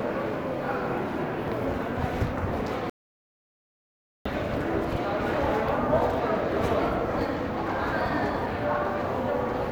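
The input was likely lost between 2.90 and 4.25 s while recording continued, an audio dropout to silence: about 1.36 s of silence, no room tone.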